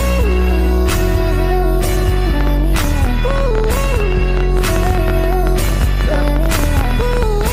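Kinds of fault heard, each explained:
Train of clicks: from about 2.41 s to 7.48 s, a rapid series of similar sharp pulses rides over the sound at roughly 12 per second, unevenly spaced, around seventy in all, peaking about 10 dB above the audio and audible as ticking even in pauses. The likely cause is pulse interference from nearby equipment or a faulty connection or power supply. On a waveform they appear as narrow spikes; a spectrogram shows thin full-height vertical lines at irregular intervals.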